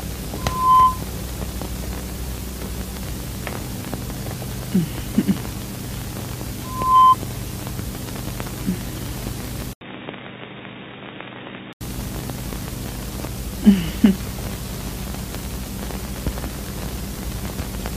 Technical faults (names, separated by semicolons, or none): loudspeaker feedback squeal; input switched to a poorer device